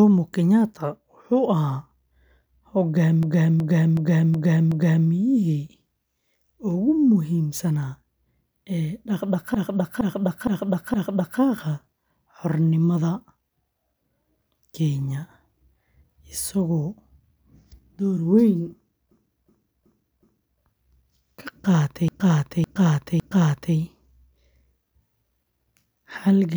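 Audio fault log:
3.23–5.09 s, 9.55–11.40 s, 19.11–20.60 s, 22.08–23.76 s: repeated frames. A 0.37 to 0.56 s block of compressed audio replays three to five extra times, heard as stuttering, and the waveform and spectrogram show identical blocks copied side by side.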